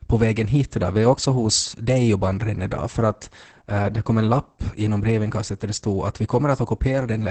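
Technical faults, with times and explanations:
Throughout, Opus voice compression: the speech sounds muffled, hoarse and a little robotic, with nothing above about 8.7 kHz. The heavy damage points to a low bitrate, around 10 kbps, where the encoder drops to its SILK linear-prediction coder in wideband mode, cutting the top of the spectrum and coding the excitation coarsely in 20 ms frames. That coarse excitation is what gives the voice its rough, buzzy, synthetic edge.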